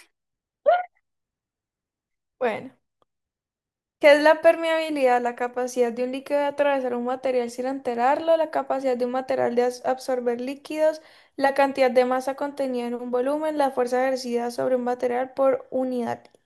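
No technical faults can be heard anywhere in this speech recording. There is no moment in the audio that calls for a timestamp or an explanation.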